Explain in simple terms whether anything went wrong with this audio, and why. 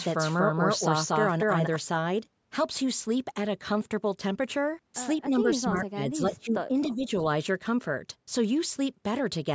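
A doubled audio track runs from the very start until 1.76 s: the speech is heard twice, with a second copy about as loud trailing roughly a fifth of a second behind. It is likely the same sound was captured again through a slower path, or an edit left two copies out of step.

Speech suppressed in double talk appears between 5.29 and 7.07 s: for about a second in total, the speech drops sharply in loudness. The likely cause is both sides talking at once, so the call's echo canceller couldn't tell this talker from loudspeaker echo and turned everything down.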